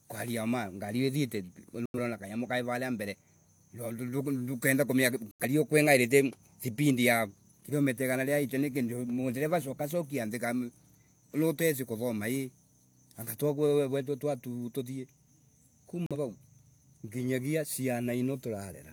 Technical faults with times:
1.86-1.99 corrupt frame muted
5.31-5.44 corrupt frame muted
16.06-16.16 corrupt frame muted

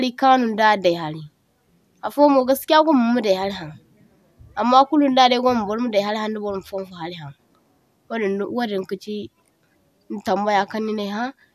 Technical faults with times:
none

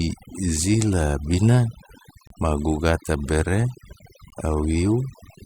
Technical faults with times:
0.00-5.46 overdone noise removal
2.27-2.30 gap between stream segments
4.30 gap between stream segments

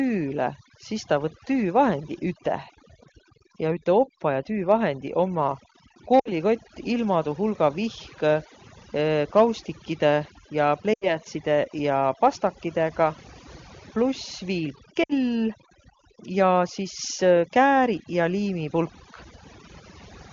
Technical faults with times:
0.00-20.33 overdone noise removal
6.19-6.31 lost AMR speech frames
10.93-11.16 lost AMR speech frames
15.04-15.13 lost AMR speech frames

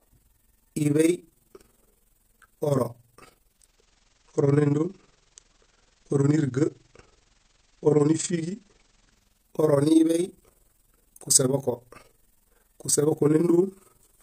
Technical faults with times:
0.00-14.22 overlap-add ripple
3.39-9.57 digital radio blending to analogue

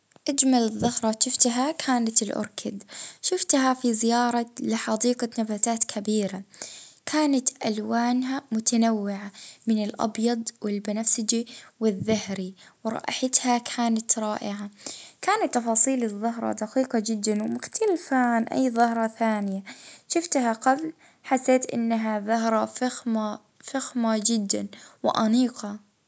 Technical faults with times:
17.28-19.60 resampler restarted on every block

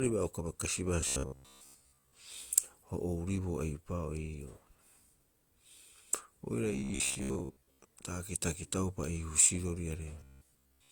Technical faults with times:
0.00-10.91 transcoding between lossy codecs
1.01-2.12 robotic sound from repeated short buffers
6.73-7.85 robotic sound from repeated short buffers
10.20-10.91 robotic sound from repeated short buffers

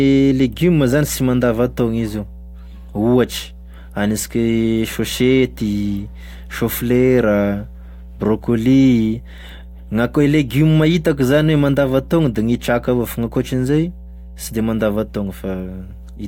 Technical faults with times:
0.00-16.27 mains hum

